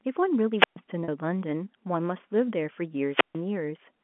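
Speech heard through a G.711 telephone channel, band-limited to roughly 200 Hz to 3.4 kHz, is interrupted twice by a wireless microphone squelch dropout. The radio link fades until the receiver mutes, giving a swell of hiss and then a silent hole of about 127 ms between 0.56 and 0.77 s, and about 144 ms between 3.08 and 3.41 s. At 1.04 to 1.08 s, packet loss with pitch repetition leaves a 40 ms gap, which fits two 20 ms packets. The receiver fills it by repeating the last pitch period, heard as a brief held, buzzy tone.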